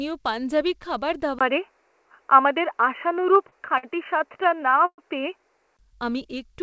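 At 1.39 s the capture likely switched to a poorer input device, such as a second microphone or a headset in call mode, after a 20 ms gap in the signal. From that point until 5.79 s the band narrows, so the speech turns dull and boxy compared with the wideband call path before and after, which reaches 8 kHz as G.722 would. The level shifts by a few decibels, and a new background noise sits far below the speech.

Between 3.22 s and 5.00 s, while the poorer input is still active, packets arrived late or too slowly, and the jitter buffer ran dry ten times. Each time, the receiver stretched the last sound to bridge the wait. The longest bridge was 118 ms, and in total 286 ms was filled this way, about 16% of that stretch. No speech is lost, but it drags and stutters in repeated small hitches.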